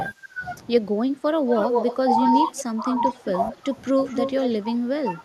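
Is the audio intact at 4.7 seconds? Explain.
No. From 4.62 s to the end at 5.25 s, the speech is suppressed in double talk: the level drops in patches totalling roughly 300 ms, by around 10 dB at worst. The likely cause is an echo canceller attenuating both talkers during overlapping speech.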